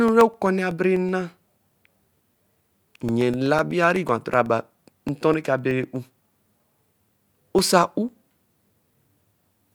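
Periodic USB or driver dropouts run through this speech clip from 0.08 s to 9.58 s, repeating every 0.125 s, eight times a second. Each time, roughly a millisecond of audio vanishes and is replaced by silence, heard as a steady ticking that sounds only while the speech is present. Something on the system is stalling the USB bus or the audio driver at a fixed interval, so tiny gaps open at an even rate.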